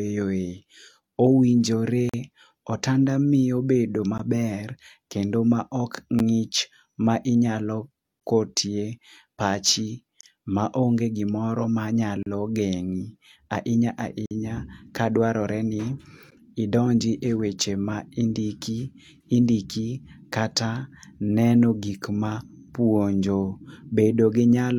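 Gaps between stream segments open at 2.09–2.14, 4.18, 6.19, 8.20, 10.21–10.23, 12.23–12.26, 14.26–14.31 and 16.31 s. These are hard-edged silences of about 11 to 49 ms, spaced every 2 s. Unlike dropouts, they insert silence without losing any speech.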